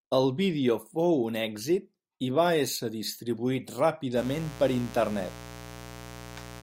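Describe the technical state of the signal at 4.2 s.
At 4.2 s the speech carries mains buzz, which begins at 4.14 s and runs to the end at 6.63 s. Sharp switching spikes on a 60 Hz supply leak in, spreading harmonics into the kilohertz range. The result is a steady, raspy buzz, roughly 15 dB below the speech.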